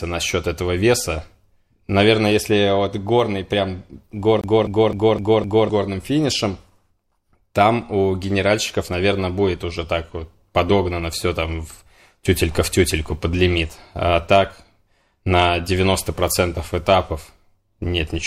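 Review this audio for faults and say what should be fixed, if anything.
A CD stuck on one turn runs from 4.41 to 5.69 s, right after "вот горный прям" and before "горным финишем". The same 256 ms stretch of the speech plays five times in a row, with a brief mute at each jump back. That gives the fast, even stutter of a skipping disc. A scratch or dirt mark throws the laser back one track at the same point on each rotation. To prevent it, clean or replace the disc, or re-rip it with an error-checking ripper so the damaged sector is re-read rather than looped.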